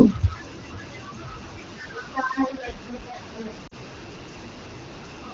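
A speech recording carries distortion from start to finish, with a constant hiss filling the pauses, most likely from a stuck bit in the converter or data path. On a waveform, samples jump by a fixed step, and a spectrogram shows a broadband noise floor even between phrases. At 3.67 to 3.75 s there is a short stretch of lost AMR speech frames, about 40 ms, which fits two 20 ms frames. The decoder holds the previous pitch and vocal tract shape while fading the level, so the sound smears briefly and dips. This appears as a narrow amplitude sag in the waveform and blurred, sustained harmonic bands in the spectrogram before normal detail returns. Speech energy reaches up to about 7 kHz, as expected of AMR-WB at 12.65 kbit/s.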